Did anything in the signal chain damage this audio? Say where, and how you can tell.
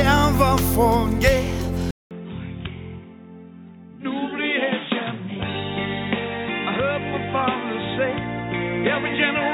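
Yes. At 1.91 s the sound cuts out for about 200 ms. It returns duller and boxier, and stays that way to the end. Nothing is left above 3.8 kHz. The level drops by around 5 dB. A faint new noise floor sits well below the signal. This is likely an input switched to a poorer device at the driver stage. A different, band-limited device took over, bringing its own tone, gain and noise.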